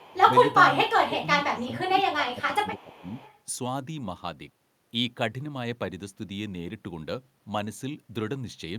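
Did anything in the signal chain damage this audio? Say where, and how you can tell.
Yes, both faults come from call processing. The speech sinks in level in three places: a brief dip at 0.0–0.04 s of roughly 5 dB, a deeper one at 0.2–0.32 s of around 10 dB, and a long stretch from 1.06 to 3.15 s where it repeatedly drops by up to about 15 dB for roughly a second and a half in total. This is likely speech suppressed in double talk: with both ends talking, the echo canceller couldn't separate this talker from the returning echo and pulled the level down.

A faint, delayed copy of the speech trails behind it at 0.0–0.17 s and again at 2.78–3.35 s, sitting roughly 30 dB below the direct sound and lagging it by 398 ms. That fixed delay and low level point to an echo leak, likely from a far end on loudspeaker whose echo canceller didn't fully remove what its microphone picked up and sent part of it back down the line.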